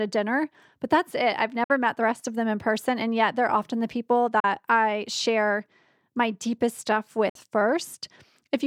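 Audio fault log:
1.64–1.70 s, 4.40–4.45 s, 7.29–7.36 s: Bluetooth dropout. The speech cuts to silence for about 56, 37 and 56 ms, after "but that's it I've", "they're often the people" and "share my deepest stuff". Playback resumes further on, as though it never paused. Lost wireless packets are the likely cause.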